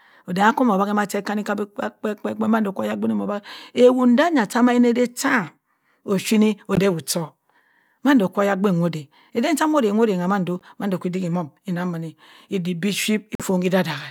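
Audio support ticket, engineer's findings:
Short silent gaps in the speech at 6.75–6.80 s, 10.59–10.62 s and 13.35–13.46 s. Likely Bluetooth dropout: late packets discarded at the headphones. Playback resumes further along with no delay or repeat, which rules out a stall. The gaps fit one, one and three lost codec frames.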